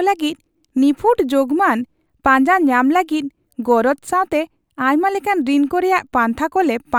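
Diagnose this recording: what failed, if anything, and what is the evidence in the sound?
Nothing failed in this recording.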